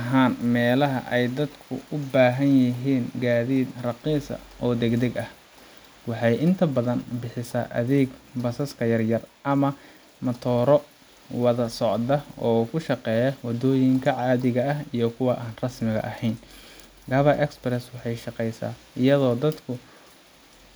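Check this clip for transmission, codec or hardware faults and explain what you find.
No transmission, codec or hardware fault can be heard anywhere in the speech. Nothing in the audio calls for further explanation.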